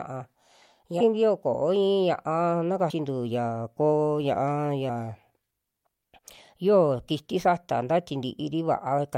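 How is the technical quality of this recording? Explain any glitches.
The recording has three audible jumps where stretches of speech go missing.

At 1.00 s the speech lurches forward by about a third of a second. This is compressed frames skipped: whole encoded frames, consistent with blocks of about 24 ms, were lost or rejected by the decoder.

At 2.89 s a shorter skip removes roughly a tenth of a second, where a few frames dropped out.

At 4.89 s another jump of about a tenth of a second occurs, again from missing compressed frames.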